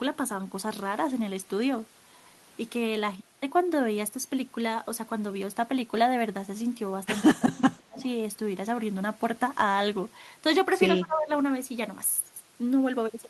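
From 7.29 to 8.0 s the speech drops sharply, sinking by about 30 dB at its deepest. This is likely speech suppressed in double talk: with both sides talking at once, the echo canceller could not tell this talker from loudspeaker echo and turned everything down. Right at the end of that dip, from 7.98 to 8.06 s, a faint copy of the voice trails 175 ms behind, about 25 dB below the speech. That is likely an echo leak, where one side's canceller failed to remove all of its loudspeaker sound from its microphone and sent the remainder back. The same suppression returns from 10.92 to 11.32 s, shallower at about 20 dB, again likely because both sides spoke over each other.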